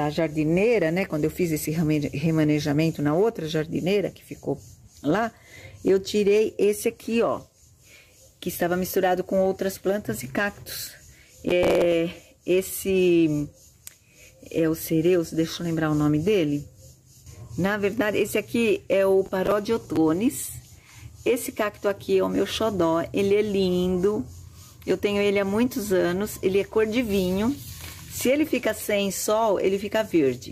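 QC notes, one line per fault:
11.49–11.92 s: processor overload crackle. A burst of gritty tearing. Stale fragments repeat with hard edges, pointing to about fifteen missed buffers of around 10 ms.
19.26–19.97 s: processor overload crackle. Bursts of crackle. Old audio is held over missed deadlines, likely several buffers of around 10 ms, then clean sound returns.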